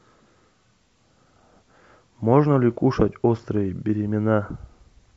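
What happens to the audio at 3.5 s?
Nothing goes wrong at 3.5 s; the speech carries on intact through that moment with no dropout, click or distortion.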